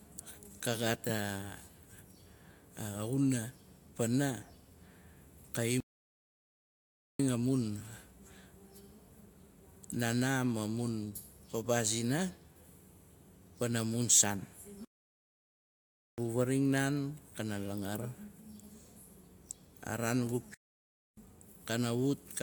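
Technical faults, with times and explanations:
5.80–7.19 s, 14.85–16.18 s and 20.54–21.17 s, playback stalls: the speech cuts out mid-flow into dead silence for about 1.4 s, 1.3 s and 0.6 s, then carries on. Likely the player ran dry of buffered data or its thread got blocked.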